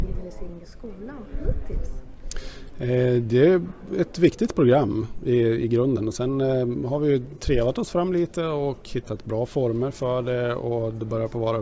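No dropouts, clicks, distortion or timing errors turn up anywhere in the recording.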